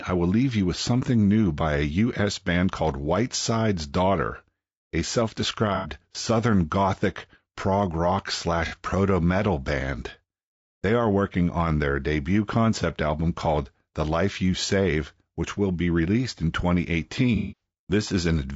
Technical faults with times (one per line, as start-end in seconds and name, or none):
0.00-18.56 low-delay AAC compression
5.75-5.88 AAC frame loss with concealment
8.66-8.74 AAC frame loss with concealment
17.36-17.61 AAC frame loss with concealment